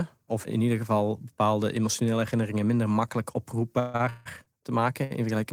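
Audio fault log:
3.79–4.48 s, repeated stalls (stutter): right after "emotionele herinneringen minder makkelijk" the speech stalls four times, the longest hold 162 ms, with about 0.37 s of stretched sound filling just over half the span. Packets arrived late repeatedly, draining the jitter buffer, so nothing is lost but delivery drags and stutters.
5.04–5.13 s, short stall from a late packet: one packet arrived 67 ms late and the jitter buffer ran dry, so the receiver held the preceding sound for 67 ms before resuming where it stopped. Nothing is skipped; the sound is briefly drawn out with a slight buzz or dip.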